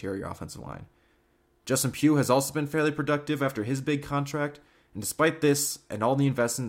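No technical faults can be heard anywhere here.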